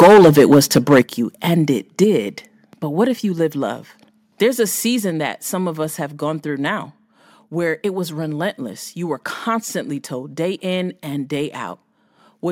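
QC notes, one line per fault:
0.00–1.00 s, microphone overload: the input was likely driven about 10 dB past the converter's limit, so the loudest peaks are flattened at the converter's limit. Roughly a tenth of the audio in that first second is cut off at the top, giving the speech a harsh, crackling edge.
0.03, 1.02, 2.04, 3.06 and 5.10 s, microphone volume stepped down: the call software likely reacted to the overload by cutting the device's input gain in single steps, of about 2, 7, 4, 2 and 2 dB. Each time, voice and background drop together abruptly, the largest fall coming just after the distorted opening second.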